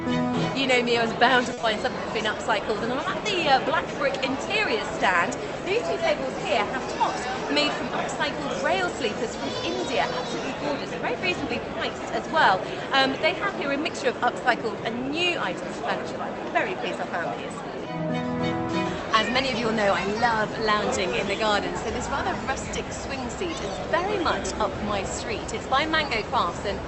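At 1.53 s a short stall from a late packet holds the sound for about 40 ms until 1.59 s. The jitter buffer ran dry, so the receiver stretched the last sound and then resumed where it stopped. Nothing is lost. Unlike concealed loss, it is a held, slightly buzzy sustain rather than a gap.

Right after, from 1.61 to 1.65 s, short concealed packet loss replaces 20 ms that never arrived. The receiver synthesised a continuation and blended back in, which gives a brief smear or wobble. Here the original material is actually missing, not just delayed.

From 7.22 to 8.33 s a jitter buffer speed-up plays the audio at 103% speed. The receiver trimmed roughly 40 ms in small pitch-period pieces to reduce excess buffered delay. The passage runs slightly faster while the pitch stays unchanged, which separates it from a resampling error that would also raise the pitch.

Throughout, the Opus call path's coding leaves nothing above about 8 kHz, consistent with a setting near 32 kbps.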